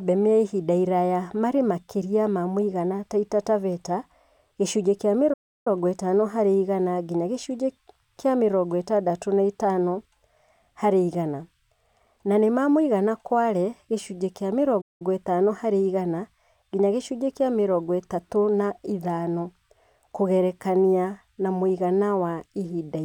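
Two playback stalls cut the speech dead: at 5.33 s, after "gĩcunjĩ kia", silence runs about 325 ms before "ĩtano harĩ igana nginya" picks up; at 14.81 s, same spot, roughly 190 ms. Likely the player starved of data or its thread got blocked.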